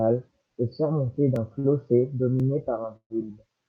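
Dropped buffer (overrun) at 1.36 s: the sound jumps forward slightly, with no gap. The program likely failed to collect a buffer before the hardware overwrote it, so a sliver of roughly a millisecond and a half vanished and the edges were spliced together.

Short stall from a late packet from 1.59 to 1.66 s: a packet missed its slot and the jitter buffer emptied, so the receiver held the last sound for 50 ms, heard as a faintly buzzy drawn-out moment. Nothing is lost; playback resumes where it stopped, now 50 ms later.

A second dropped buffer (overrun) at 2.40 s gives the same kind of small skip, with a similarly tiny slice of audio gone.

Call audio freeze from 2.96 to 3.12 s: the sound stretches into a fading buzz that falls into about 70 ms of silence before the audio carries on. Packets likely held up in transit left the jitter buffer dry, so 135 ms of filler was inserted and nothing is missing.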